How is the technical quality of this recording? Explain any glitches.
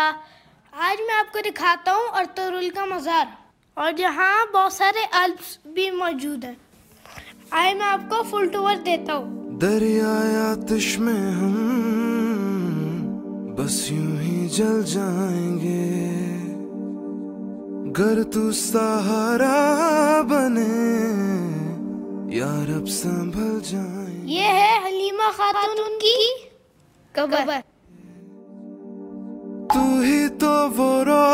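A doubled audio track runs from 25.54 to 27.62 s. A second, full-band copy of the sound trails the original by roughly 150 ms at about the same level, most likely because the audio was captured again through a slower path or an edit left two copies out of alignment. It sounds like a hard, dry slapback with no decay or room colour, and it switches on and off abruptly at both edges.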